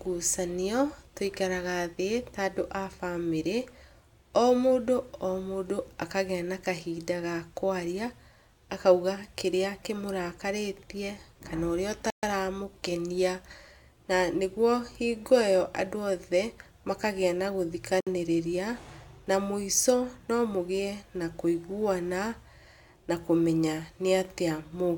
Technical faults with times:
12.10-12.23 Bluetooth stall
18.00-18.07 Bluetooth stall

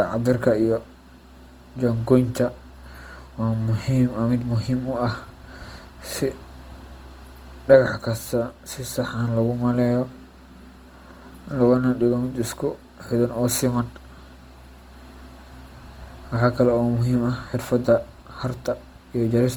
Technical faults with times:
0.00-19.56 Opus compression

